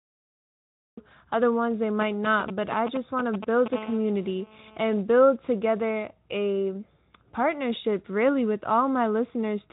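The clip has a cut-off start. Digital silence runs until 0.97 s. The sound then begins abruptly, mid-sound, with no attack, just before "other ones they".

From 2.01 to 3.68 s, after "other ones they", GSM signalling bursts intrude. A nearby 2G phone's radio pulses are rectified into galloping ticks and short 217 Hz buzzes, nearly as loud as the speech.

From 3.73 to 5.01 s, just before "build together a partnership", a steady GSM phone buzz sits about 17 dB below the speech. It is a hard, raspy 217 Hz tone rich in harmonics, from a phone in a call. It plays over speech carried by the Speex codec, with nothing above 3.8 kHz.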